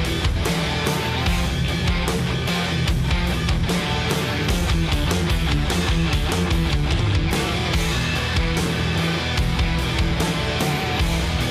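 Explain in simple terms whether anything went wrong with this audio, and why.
Nothing went wrong; no faults can be heard here.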